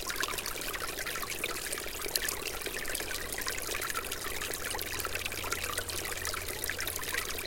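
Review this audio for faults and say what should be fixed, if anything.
Nothing here needs fixing, since no technical faults turn up anywhere in this recording of sounds.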